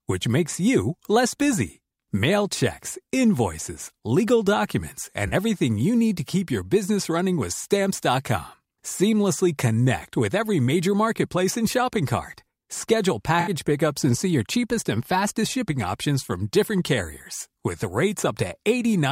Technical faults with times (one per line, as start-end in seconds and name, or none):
5.27-5.33 AAC frame loss with concealment
13.40-13.50 AAC frame loss with concealment